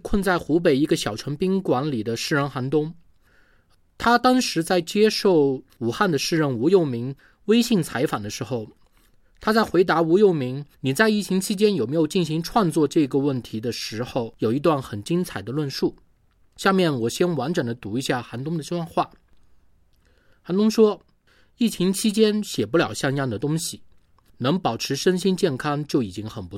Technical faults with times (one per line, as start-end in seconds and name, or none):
none